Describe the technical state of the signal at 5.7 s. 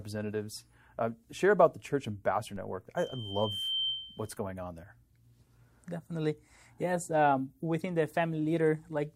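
At 5.7 s the signal is intact, with no fault of any kind at that point.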